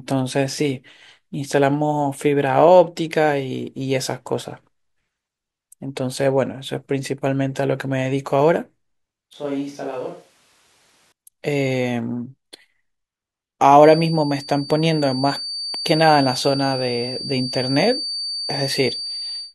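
A switch to a distant microphone occurs from 9.33 to 11.12 s. The close microphone's feed likely dropped out, leaving a pickup further away: the speech turns abruptly roomy and hollow, loses bass, falls by about 10 dB, and exposes background noise, then snaps back.

A feedback whistle begins at 13.79 s and runs to the end at 19.54 s. The speaker-to-microphone loop likely sits just short of runaway, sustaining a thin 4.6 kHz tone about 10 dB below the speech that swells and fades slowly in level without building up.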